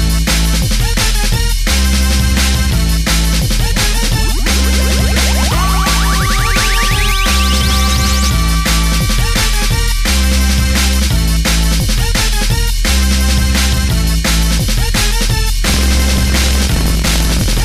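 From 15.63 s to the end, buffer tearing sets in. The writer and reader of the ring buffer have slipped out of step. About a sixth of each buffer replays audio roughly a tenth of a second old. Hard joins produce a robotic buzz near 43.1 Hz, which fits a 1024-sample buffer.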